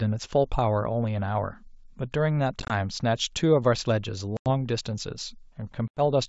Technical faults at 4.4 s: packet loss on an ADPCM call

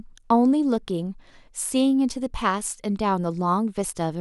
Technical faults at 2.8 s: none

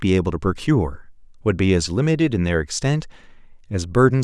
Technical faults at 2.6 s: none

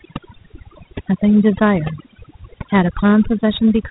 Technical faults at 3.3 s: overdone noise removal; Dialogic VOX ADPCM

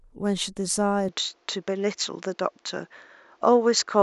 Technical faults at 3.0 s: input switched to a poorer device

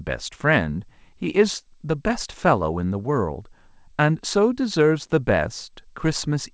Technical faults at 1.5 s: none

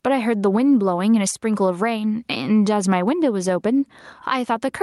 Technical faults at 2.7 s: gain pumping

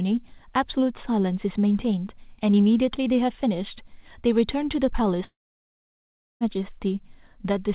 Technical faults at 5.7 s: long network dropout

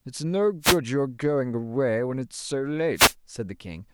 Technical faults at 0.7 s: wireless microphone noise hit

